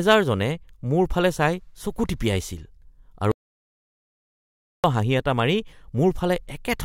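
Audio dropout to silence, 3.32 to 4.84 s: the speech cuts to complete silence with no room tone, likely because the input was lost while recording continued.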